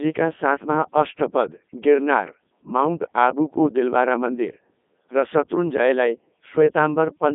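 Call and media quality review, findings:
Codec 2 vocoder, throughout the speech. Robotic, buzzy voice; band roughly 200 Hz to 3.6 kHz, nothing above 3.8 kHz. Decoder resynthesises from sine waves using only pitch, voicing, energy and envelope. Heavy damage fits Codec 2's 3.2 kbit/s mode.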